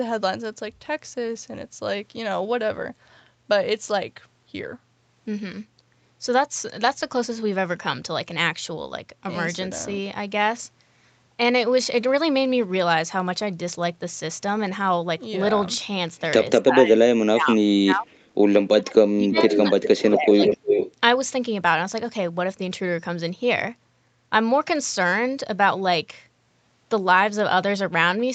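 From 16.61 to 18.09 s the talker's speech drops away by up to about 35 dB in pieces, then again from 18.74 to 19.79 s by up to about 30 dB, and from 19.99 to 20.43 s by about 15 dB. This is speech suppressed in double talk, likely caused by the talker's own echo canceller failing to separate its talker from the loudspeaker echo while both sides spoke, and attenuating both. Words thin out or vanish in short chunks rather than fading smoothly.

Interleaved with these dips, at 19.31 to 19.58 s, 19.81 to 20.15 s and 20.45 to 20.92 s, a delayed copy of the speech returns about 0.35 s late. This is an echo leak. The likely cause is the loudspeaker side's canceller not fully removing what its microphone picked up, so residual echo was sent back. It sits at about 5 dB, 10 dB and then roughly 0 dB below the direct speech, so the last burst is as loud as the talker, and it sounds like a doubled repeat. 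The whole clip is band-limited to 8 kHz, which fits an Opus call path at around 32 kbps.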